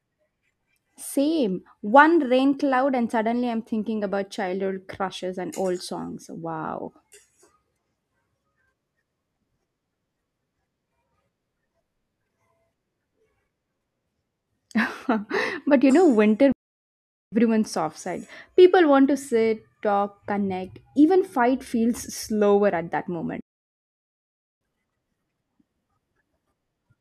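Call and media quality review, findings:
Playback stall, 16.52–17.32 s: speech cuts out mid-flow for about 0.8 s, then resumes. Waveform drops to a flat line with hard edges; spectrogram shows a clean blank vertical band. Likely player buffer underrun or blocked audio thread.

Playback stall, 23.41–24.61 s: same symptom, longer, about 1.2 s of silence. Identical flat-line gap and empty spectrogram column, abrupt onset and restart. Likely same player-side starvation mechanism.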